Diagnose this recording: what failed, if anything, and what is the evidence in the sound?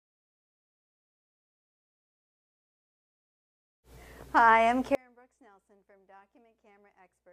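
The signal path most likely broke upstream, in the analogue wiring or a connector, while everything after it stayed live. The result is an audio dropout to a faint residue: at 4.95 s the sound cuts abruptly to a faint residue roughly 30 dB down, lasting to the end.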